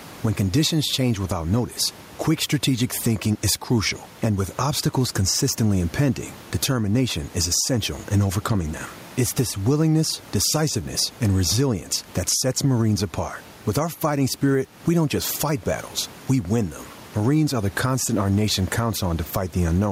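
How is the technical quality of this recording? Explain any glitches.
The recording has gain pumping from start to finish. Throughout the speech, the level swings by around 10 dB. Loud and quiet passages sit unnaturally close together, giving a squashed, breathing quality. The likely cause is input gain set far too high for the microphone, with a fast limiter or compressor clamping down on each loud syllable and releasing in the gaps. The room noise sits about 33 dB below the speech.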